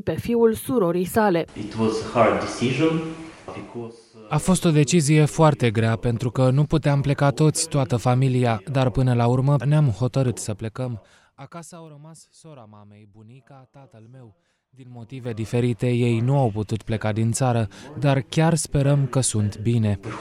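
A ticking, zipping texture rides on the sound from 10.44 to 11.9 s as the level drops roughly 25 dB, and again from 14.82 to 15.56 s as it rises back. This is zipper noise: the gain moves in unsmoothed steps of about 2 dB, roughly ten and fifteen per second, each clicking.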